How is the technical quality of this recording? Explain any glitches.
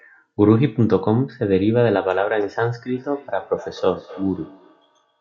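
The recording has one fault. From 2.94 s to the end, there is feedback echo between two devices. The speech returns roughly every 300 ms, at about 21 dB below the speech. A second device's speaker feeds this microphone. The local echo canceller cannot remove sound it did not play.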